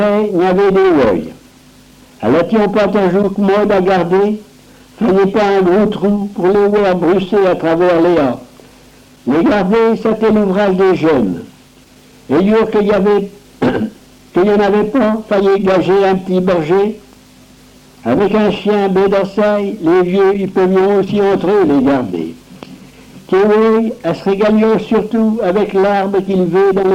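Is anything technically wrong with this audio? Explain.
No, nothing technically wrong can be heard in this audio. No dropout, glitch or other defect turns up at any point in the recording.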